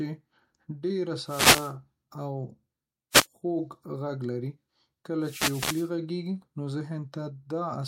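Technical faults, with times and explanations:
1.23–1.74 s, 3.11–3.27 s and 5.20–5.91 s, wireless microphone noise hits: the analogue FM radio link fades as reflections cancel, so receiver noise swells into swishes of static over the speech. Unlike a digital dropout, the sound is buried in noise rather than cut to silence.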